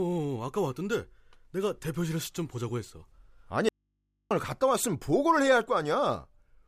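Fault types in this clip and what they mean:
Audio dropout to a faint residue: the speech cuts out abruptly from 3.69 to 4.31 s, leaving only mains hum about 50 dB below the signal, likely a lost link with the input still live. The waveform collapses to a thin flat band, and the spectrogram shows only low hum lines.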